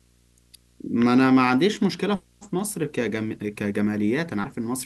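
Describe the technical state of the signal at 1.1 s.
At 1.1 s you're hearing video or display buzz, and it isn't local to that moment: it runs under the speech for the whole clip. A screen or video cable is leaking into the audio path, so there's a low buzz at the 59.94 Hz field rate with grainy hash riding on top, plus a thin, very high whine at the 15.7 kHz line rate. It sits well down, roughly 35 dB below the speech.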